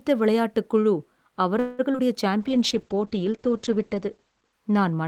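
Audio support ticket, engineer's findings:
Call audio freeze, 1.59–1.81 s: speech halts and the last sound is stretched into a fading buzz for about 0.19 s, then resumes where it stopped. Nothing is lost, but roughly 194 ms of delay is added. Likely cause: delayed packets draining the jitter buffer, so the receiver extended the last audio until arrivals resumed.

Short concealed packet loss, 1.93–1.96 s and 1.98–2.01 s: two brief smears or wobbles right after the freeze. About 20 ms of audio is missing in each. The decoder patched each gap by continuing the preceding sound and crossfading back, so any short consonant there may vanish.

Call bitrate drop, from 2.42 s to the end: speech turns rough, watery and muffled, with the top end gone. The bandwidth estimate fell and the Opus encoder went from 32 to 9 kbps, staying at the lowest rate for about 1.6 s. Coarser coding plus a cut in audio bandwidth from 20 kHz to 8 kHz.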